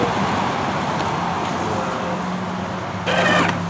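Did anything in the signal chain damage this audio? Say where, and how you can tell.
No, nothing in the signal chain damaged this audio; it went through a G.722 call path at 64 kbps, which is why nothing is heard above 8 kHz.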